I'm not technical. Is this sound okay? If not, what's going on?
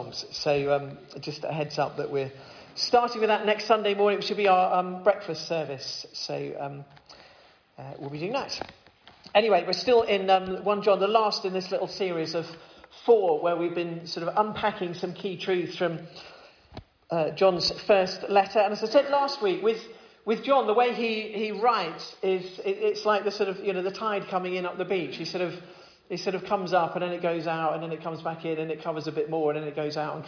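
Yes, no faults are audible.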